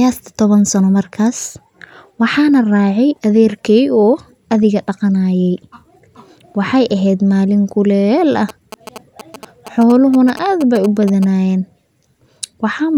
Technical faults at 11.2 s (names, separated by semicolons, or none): GSM signalling bursts